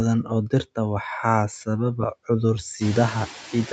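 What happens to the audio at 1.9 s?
A noise suppressor runs through the whole clip, including 1.9 s, gating down each frequency band it judges to be steady noise frame by frame, by about 4 dB, so the noise sinks between the words and rises under them.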